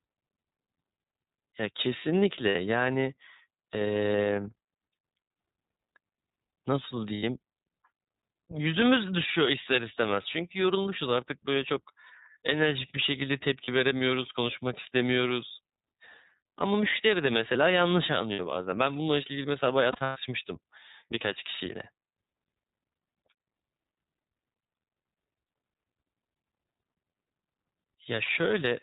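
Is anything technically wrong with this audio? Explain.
Yes. Throughout, the speech sounds narrow and telephone-like, slightly rough and synthetic, with nothing above 4 kHz. This is the iLBC codec. Each frame's excitation is coded independently, and the damage is plainly audible. It fits the 13.33 kbps mode with 30 ms frames.

Brief held, buzzy, vowel-like smears appear at 2.49–2.56 s, 7.14–7.23 s, 13.64–13.69 s and 18.33–18.40 s. A longer, broken stretch runs from 19.92 to 20.17 s, with its longest run about a tenth of a second. These are lost iLBC frames. The decoder repeats the last pitch cycle with noise, and clarity returns almost immediately.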